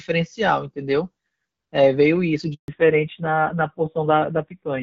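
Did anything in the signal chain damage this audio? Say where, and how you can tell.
Yes. At the network stage there is a handover gap from 2.54 to 2.68 s. The speech dies away within a few tens of milliseconds into 140 ms of silence, as the call switched networks and no frames arrived. The waveform flatlines there, and the spectrogram shows a clean vertical blank band.

From 2.68 s to the end, the codec stage shows a fallback to narrowband. Before it, the lightly coded HD Voice (AMR-WB) signal reaches well above 4 kHz. Afterwards the spectrogram is cut flat at 4 kHz and the voice turns duller and rougher, which points to narrowband AMR at a low rate of about 5.9 kbit/s.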